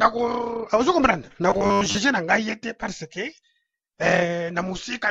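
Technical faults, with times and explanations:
1.5 to 1.97 s, robotic sound from repeated short buffers: fresh audio likely arrived too seldom, so playback kept recycling a short stretch, about half the sound being repeats. The repetition imposes a rigid 100 Hz metallic buzz, which fits a 10 ms buffer.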